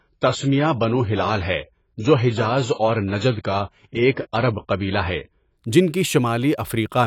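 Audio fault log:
0.00–5.57 s, adaptive stream starting at a low bitrate: the speech opens thin and smeared, with nothing above about 7.7 kHz and stronger codec artefacts, which fits a player grabbing a very low AAC tier (something around 16 kbit/s) to start fast. Once it had sized up the connection it jumped to a much richer rendition, around 96 kbit/s, right before "جن کی". Treble and clarity snap back at once, with no gap or dropout at the switch.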